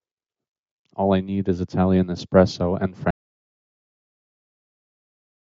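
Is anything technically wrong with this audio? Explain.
Yes. At 3.1 s the speech stops abruptly and the clip stays in complete silence through to the end. This is an audio dropout to silence. The input was likely lost, through a disconnected device, a failed link or a mute, while the recording kept writing silence. Unlike a noise gate or suppressor closing during a pause, no room tone or residual hiss remains, and speech does not return. The call-style microphone processing, with nothing above 8 kHz, is audible before the cut.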